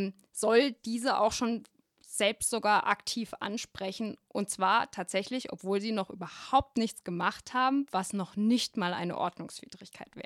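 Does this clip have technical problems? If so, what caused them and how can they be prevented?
No, this clip has no technical problems, so there is nothing to prevent.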